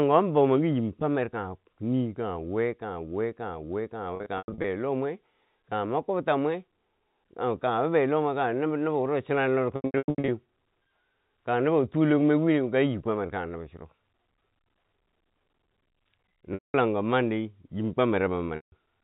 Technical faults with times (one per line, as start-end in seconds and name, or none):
4.16-4.64 packet loss with pitch repetition
9.76-10.28 packet loss with pitch repetition
16.54-16.74 packet loss with pitch repetition
18.56-18.72 packet loss with pitch repetition